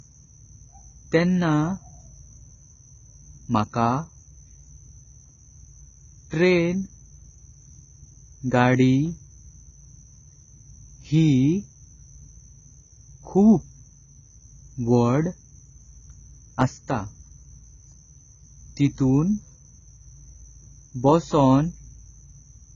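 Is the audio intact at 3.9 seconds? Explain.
No. At 3.9 seconds the speech carries the same damage heard through the whole clip, most likely AAC compression at a very low bitrate, around 16 kbps. With so few bits, the encoder drops everything above 7 kHz and coarsely quantises what remains, so sibilants turn fizzy and vowels warble and smear. A spectrogram shows a hard ceiling at 7 kHz, while the waveform looks unremarkable.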